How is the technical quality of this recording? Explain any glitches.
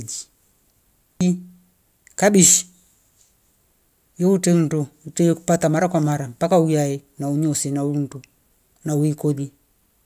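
Good news: there are no glitches to explain here, since no technical faults turn up anywhere in the recording.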